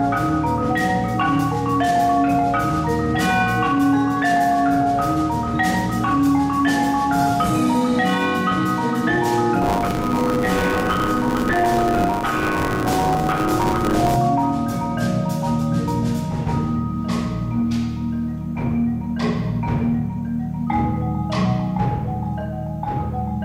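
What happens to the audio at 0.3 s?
Nothing goes wrong at 0.3 s; the audio is intact there, with no dropout, click or distortion at that point.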